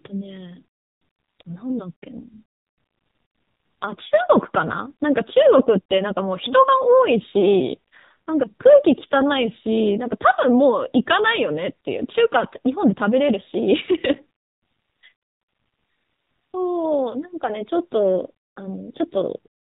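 AMR narrowband mobile codec damage runs throughout: everything above 4 kHz is missing, and the speech, rebuilt by a vocal-tract model driven by sparse pulses, sounds plainly buzzy and synthetic. That degree of damage fits a low rate near 7.4 kbps.

AMR bit errors strike from 15.22 to 15.26 s, a 40 ms stretch that fits two 20 ms frames. Flipped bits, at an error rate of a few percent, misplace the driving pulses and skew the finer values, so the speech briefly turns hoarse and gargly while keeping roughly its pitch and level.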